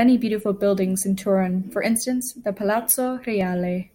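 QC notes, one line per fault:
No faults found in this clip.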